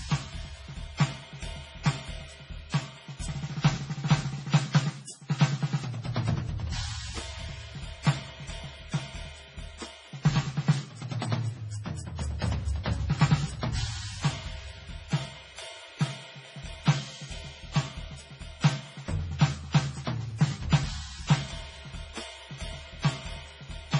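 Throughout the music, heavy swirling, watery artefacts and nothing above 10.4 kHz point to likely MP3 compression at a very low bitrate, around 24 kbps, rather than a simple low-pass filter.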